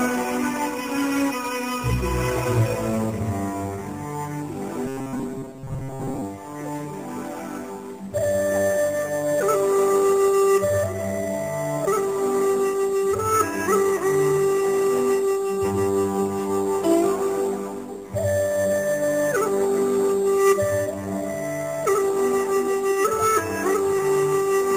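Robotic sound from repeated short buffers runs from 4.86 to 6.22 s, a rigid metallic buzz at 134 Hz. It likely comes from audio arriving too seldom, with the last fragment of roughly 7.5 ms looped over most of that stretch while fresh audio is skipped.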